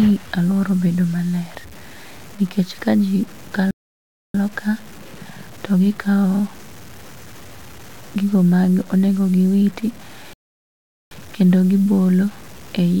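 Throughout the speech there is grainy distortion that rises and falls with the voice, with the grit sitting roughly 25 dB below the signal. It is likely low bit depth without dither, truncated to about 6 bits. Unlike steady hiss, the error tracks the signal.

From 3.71 to 4.35 s the audio cuts to silence for about 0.63 s, and from 10.33 to 11.11 s for about 0.78 s, likely a playback stall where output data ran out. These are long, clean gaps rather than the brief clicks or chirps of lost packets.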